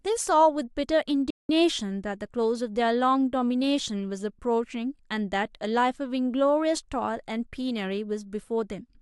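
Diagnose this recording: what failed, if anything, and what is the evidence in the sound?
The speech cuts out abruptly at 1.30 s and stays silent until 1.49 s, a gap of about 0.19 s that lands mid-flow rather than at a natural pause. The speech then carries on. This is a playback stall at the playback stage. The likely cause is that the player's output buffer ran dry, either because data did not arrive in time or because the audio thread was briefly blocked, so nothing reached the output until it recovered.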